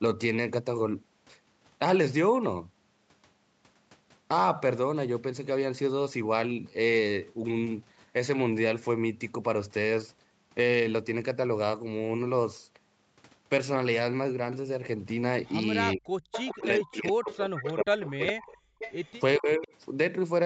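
Speech clip, and it gets messy near the end. There's echo leak, a delayed copy about 415 ms behind, briefly at 15.92 s and 19.62 to 19.68 s, and louder from 16.32 to 19.13 s, likely a loudspeaker echo the far-end canceller didn't fully remove. Overlapping that, there's speech suppressed in double talk: the voice dips by about 40 dB from 15.95 to 16.16 s and 16.64 to 18.75 s, and by about 15 dB from 19.38 to 19.7 s, as the canceller likely ducks everything while both sides talk.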